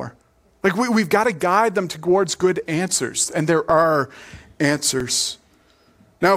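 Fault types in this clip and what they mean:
Underrun with held sample: at 3.70 s, after "good answers and there", and at 5.00 s, the output starves and the converter holds its last value for 1.45 ms, fitting a 64-sample buffer. The waveform goes flat, then resumes after about 1.5 ms of live audio is lost.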